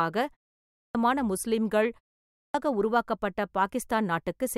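At 0.64 s and 2.22 s, speech resumes with its opening cut away. This is a clipped start after a pause: the output device slept during a short gap and woke late, swallowing about 0.31 s and 0.32 s. Unlike muted pauses, actual speech is lost.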